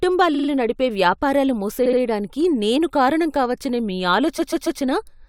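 Runs of compressed frames were sent more than once, giving repeated frames, so the decoder replays the same slice of speech. At 0.34 to 0.48 s a 46 ms block, which fits two frames, plays three extra times; at 1.85 to 1.99 s a 70 ms block repeats twice; at 4.38 to 4.80 s a 139 ms block repeats three times. Each sounds like a stutter, and together they stretch the speech by about 0.7 s.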